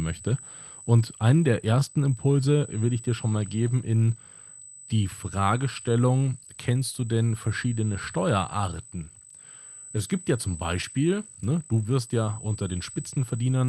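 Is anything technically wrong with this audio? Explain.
Yes. Two problems run through the whole clip: a steady USB whine, and clock drift between sender and receiver that forces repeated timing corrections.

USB whine: A fixed-pitch tone at 8 kHz sits under the speech for the entire clip, only about 15 dB below it, as a thin, high whistle. That frequency matches the 125-microsecond microframe rate of a USB bus. Current drawn in those bursts is leaking into the audio through a shared power or ground path. The call's audio band reaches up to 12 kHz, so the tone passes through intact.

Clock drift between sender and receiver: The sending device's audio clock runs roughly 2% slow relative to the receiver's. The receiver therefore consumes samples slightly faster than they arrive. Its jitter buffer keeps draining, and unless it is corrected the buffer would run empty and cause gaps. The drift itself has no distinct sound. 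What can be heard is the receiver's ongoing effort to compensate for it.

Repeated timing corrections: From 0.18 s to 13.59 s, the receiver keeps inserting small repeated fragments to refill the buffer. The speech plays at 98% of its original rate, and the insertions add up to around 200 ms over the clip. Each insertion is small and spaced unevenly, and all of them stretch the audio in the same direction. If heard at all, the result is faint hiccups and a slightly uneven, dragging tempo.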